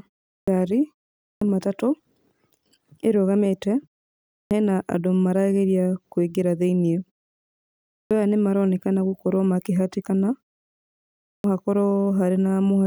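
At 0.32, 1.26, 4.36 (before "hena andũ marageria kwĩngĩra"), 7.95 (before "aya nĩ maronekana gũkorwo") and 11.28 s, a clipped start after a pause: the sleeping output wakes late, swallowing about 150–160 ms of speech onset. Unlike muted pauses, where only background drops, sound itself is lost.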